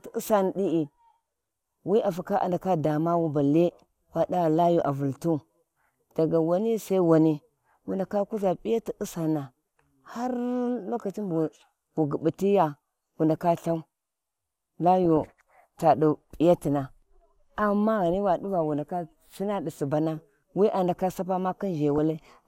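Short blips of noise break through the speech at 4.80–4.87 s, 15.04–15.22 s and 21.96–21.98 s. This is DAB burbling: weak reception let bit errors, a fraction of a percent, past error correction, so wrong samples put short blips of noise in single sub-bands.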